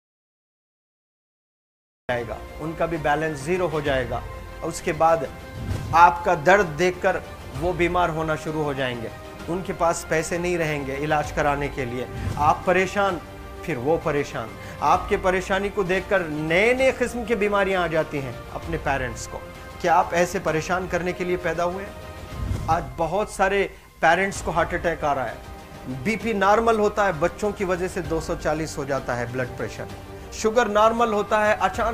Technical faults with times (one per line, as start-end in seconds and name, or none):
0.00-2.09 audio dropout to silence